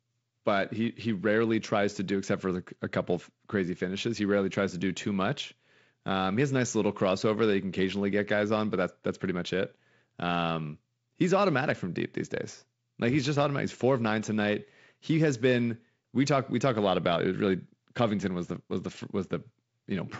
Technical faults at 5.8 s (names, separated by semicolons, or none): none